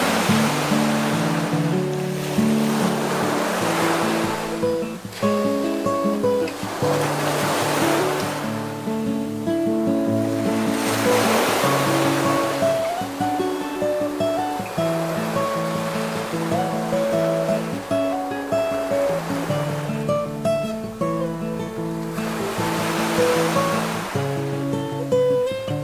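No technical faults can be heard anywhere in this recording.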